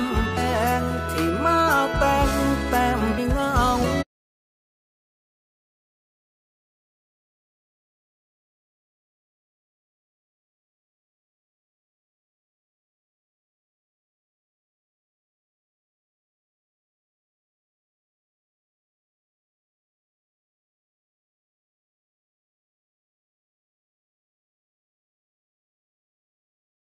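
Damaged data in a compressed stream strikes at 0.36 s and again at 3.17 s. Corrupted bytes leave the decoder unable to read those frames, so it loses sync while hunting for the next valid header, producing a brief glitch that cuts into the sound each time.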